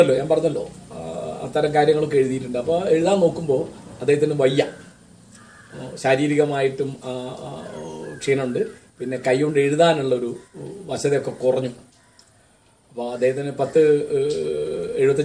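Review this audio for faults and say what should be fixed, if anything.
No technical faults can be heard anywhere in this audio. Nothing needs to be fixed.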